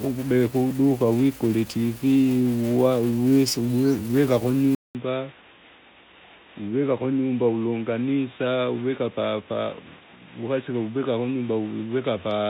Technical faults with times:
4.75-12.49 input switched to a poorer device

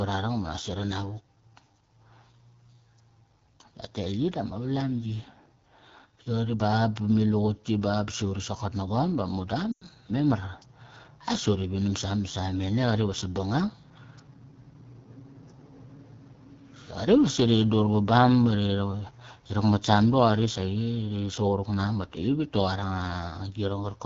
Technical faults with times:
0.00-24.06 AMR wideband (HD Voice) codec
9.72-9.84 lost AMR speech frames

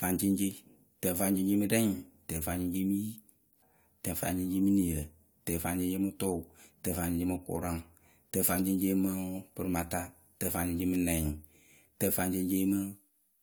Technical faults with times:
3.61 stream segment skipped

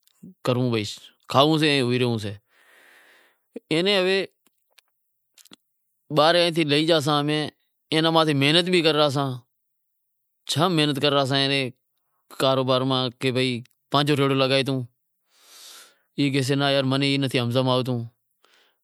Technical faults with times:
0.44 pre-echo

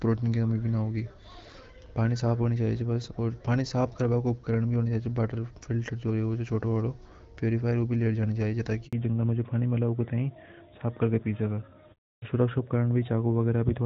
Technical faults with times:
8.87-8.93 handover gap
8.93-13.85 fallback to narrowband

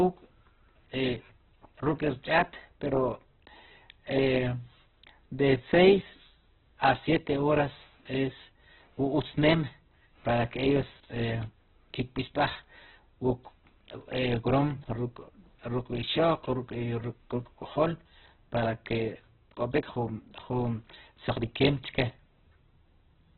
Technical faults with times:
0.00-23.38 Opus compression

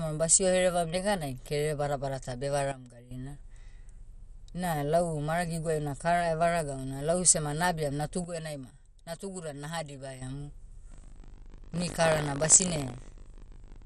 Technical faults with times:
0.00-13.85 MP2 compression
2.72-3.11 sudden gain jump
8.24-10.22 sudden gain jump
10.90-13.85 buffer tearing

